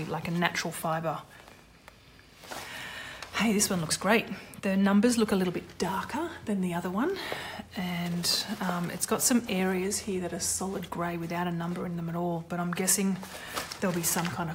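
Nothing here trips the ear at any point, so there's no technical fault to point to in this recording.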